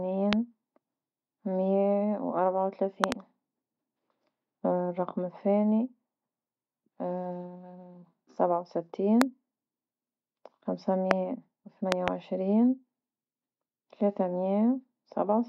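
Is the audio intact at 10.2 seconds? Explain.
Yes, the speech at 10.2 seconds is intact, with no audible fault at that moment.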